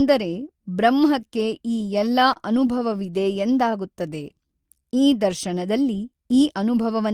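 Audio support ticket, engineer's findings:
Repeated stalls (stutter), 1.93–3.18 s: twelve brief holds, longest 31 ms, about 137 ms filled in total. Jitter buffer underrunning on late packets; receiver extends last sound. Nothing lost.

Jitter buffer slow-down, 3.64–5.01 s, just before "ಈ ದರ್ಶನದಲ್ಲಿ": speech drawn out to 90% speed, pitch unchanged, 140 ms added. Receiver repeating pitch periods to rebuild buffer reserve.

Bit error spike, 6.31 s, right after "ಈ ದರ್ಶನದಲ್ಲಿ": single sharp broadband tick unrelated to speech. Flipped bit across two samples, memory or digital link.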